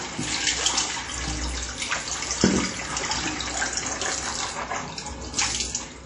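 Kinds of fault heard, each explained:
WMA compression: a ringing, washy smear with hiss that breathes with the sound and nothing above about 10.1 kHz, likely from low-bitrate WMA encoding near 32 kbps.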